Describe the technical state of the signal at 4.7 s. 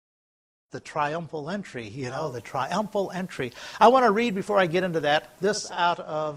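At 4.7 s the receiver is in a digital radio blend to analogue, running from 2.07 to 5.80 s. It has cross-faded over about 0.3 s to the FM signal, bringing a steady hiss roughly 35 dB down and a level shift of about 4 dB. On a spectrogram this shows as a raised broadband noise floor, and on the waveform as a step in envelope height.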